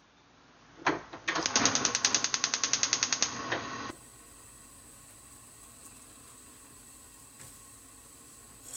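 A recording of everyday sounds whose first 3.90 s are dull and boxy, with nothing above 6.6 kHz, a level shift of roughly 5 dB and a faint new noise well below the sound. It clears at 3.90 s with no gap, likely an input switched to a poorer device. The changed tone, level and noise floor together set it apart from plain low-pass filtering.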